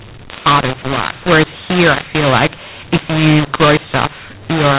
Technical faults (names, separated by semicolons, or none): mu-law and A-law mixed up